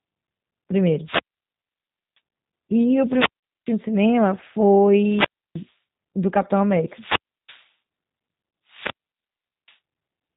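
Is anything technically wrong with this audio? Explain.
Yes. Three kinds of fault can be heard.

Throughout, the speech sounds slightly rough and synthetic, and it lacks all high-frequency content. This is G.729 codec damage, which fits an 8 kbit/s G.729A stream. The codec rebuilds speech from a filter, a pitch predictor and a few pulses per frame, and cuts everything above 4 kHz.

Wireless microphone squelch dropouts occur at 1.01–2.20 s, 2.97–3.80 s, 4.86–5.76 s, 6.80–7.72 s and 8.66–9.78 s. In each, hiss rises, the sound then drops to near silence, and the voice returns. The silent holes last about 0.98, 0.41, 0.31, 0.33 and 0.78 s. They happen as the FM radio link fades and the receiver's squelch mutes the output.

VoIP packet loss concealed by the speech codec occurs at 3.40–3.43 s, inside the second dropout, and again at 8.50–8.53 s. Each 30 ms gap is filled with stretched sound, a buzzy tone or coloured noise that fades, and the speech stays weak briefly afterward. 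The decoder extrapolates from its last pitch and filter while it lowers the gain.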